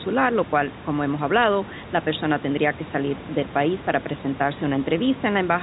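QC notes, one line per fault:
No faults are audible: the speech sits about 17 dB above the room noise, and its G.711 mu-law telephone coding passes nothing above 3.9 kHz, as that format normally does.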